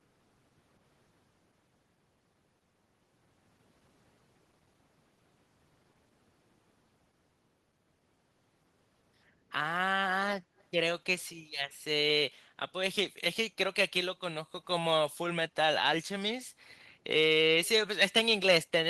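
At 10.58 to 10.64 s the speech carries a brief echo leak: a very faint copy of the voice, roughly 40 dB below it and delayed by 158 ms, most likely left behind by a far-end echo canceller that did not fully suppress loudspeaker pickup.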